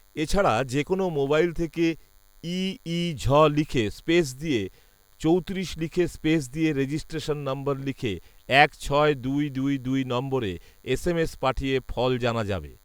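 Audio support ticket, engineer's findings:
DECT cordless phone buzz, present throughout. Steady thin buzz at 100 Hz with dense harmonics, sitting faintly well below the speech. Nearby DECT handset or base transmitting a radio burst every 10 ms, rectified in the audio input stage.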